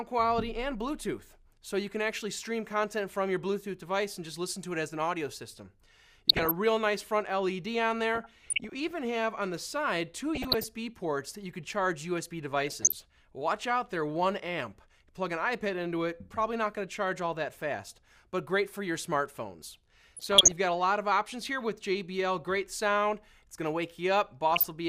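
Short patches of bubbling, watery blips and chirps break into the audio at 6.29 to 6.51 s, 8.15 to 8.91 s, 10.35 to 10.64 s, 12.61 to 12.92 s, 20.12 to 20.52 s and 24.52 to 24.68 s. This is DAB burbling: weak reception let bit errors, around half a percent, slip past error correction into the MP2 data, corrupting samples and scale factors so individual sub-bands blip or jump in level for up to a frame.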